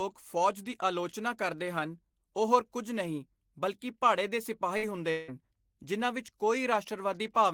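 At 4.77 s, right after "ਨਹੀਂ ਬਲਕਿ ਭਾੜੇ ਦੇ", a burst of packet loss interrupts the speech until 4.85 s. A short run of packets never arrived in time, so the receiver stretched the last sound for about 52 ms and faded it, briefly covering the hole before jumping ahead past roughly 60 ms of lost speech.

From 5.11 s to 5.30 s, just before "ਜਿਨ੍ਹਾਂ ਵਿੱਚ", the speech is replaced by about 173 ms of concealment, the last sound held and decaying, after which the audio resumes with roughly 180 ms missing. No silence forms before the audio returns. This is likely a long network dropout: the filled stretch is more than three times the first one.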